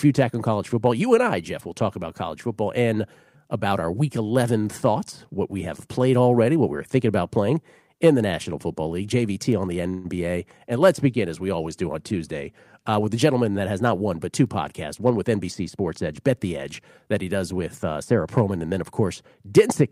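Speech recording with two playback-timing faults typical of a packet-based call. At 9.89 s a call audio freeze occurs: for about 152 ms, until 10.07 s, the last sound is stretched into a brief fading buzz or hiss rather than dropping to silence, and the speech then resumes exactly where it left off with nothing lost. This adds roughly 152 ms of delay, and the likely cause is delayed packets leaving the jitter buffer empty while the receiver filled the gap. From 15.59 s to 16.44 s there is a jitter buffer speed-up: the speech plays at about 105% of normal rate with unchanged pitch, sounding slightly hurried. The receiver trimmed around 50 ms of audio in small pitch-period slices to shrink an over-full buffer.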